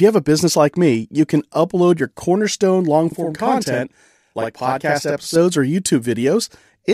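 Speech clip with a channel delay (doubling) from about 3.12 to 5.36 s. One channel lags the other by 46.44 ms, which fits a 2048-sample buffer. Once the two are summed to mono, that late copy comes through as a separate slap echo at the same level, so the voice sounds doubled.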